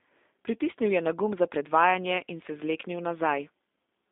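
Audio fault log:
throughout G.729 codec: speech rebuilt from a filter and sparse pulses sounds plainly rough and synthetic; spectrogram energy sits within 250 Hz to 3.6 kHz, blank above.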